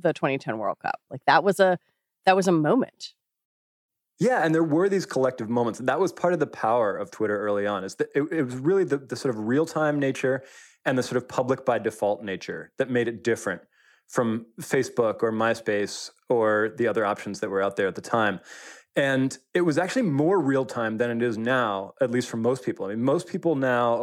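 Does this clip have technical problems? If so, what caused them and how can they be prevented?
No, no technical faults here.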